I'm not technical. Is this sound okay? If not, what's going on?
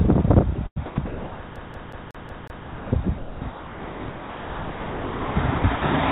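No. Two things go wrong.

From 0.56 s to 5.82 s the audio is choppy: pieces keep dropping out and being replaced by a soft, artificial hiss, about 3.2 s of fill in total. This is sound chopped by the voice detector. The likely cause is the sender's system repeatedly deciding nothing worth sending was present, switching off, and letting the receiving end play generated background noise instead of the real sound.

From 1.56 s to 2.66 s a short slice of about 0.18 s plays six times in a row, with a tiny gap at each restart. This is a CD stuck on one turn. A scratch makes the player jump back to the same spot every time the disc comes around, producing that quick, even, mechanical stutter rather than a natural repeat.

Throughout the clip, nothing above 4 kHz comes through, which gives the sound its narrow, phone-like quality.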